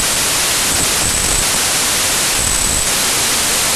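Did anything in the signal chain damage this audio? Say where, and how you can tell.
Yes. A wrong sample width at the sample-format conversion stage affects the whole clip. Packed 24-bit data read as 32-bit builds samples from mismatched bytes, so loud noise buries the speech, which runs about 1.33 times fast and high. A plain sample-rate error would shift speed without the noise.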